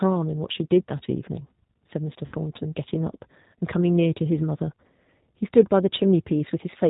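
The whole clip carries the sound of the G.729 codec, consistent with an 8 kbit/s stream. The speech is rebuilt from a vocal tract filter, a pitch predictor and a few pulses per frame. Nothing above 4 kHz survives. The result is plainly rough and synthetic.

From 2.26 to 2.35 s there is VoIP packet loss concealed by the speech codec. About 60 ms of audio went missing, which points to three lost packets. The decoder stretched its last pitch and filter into a fading sound. The speech stays weak briefly after the gap.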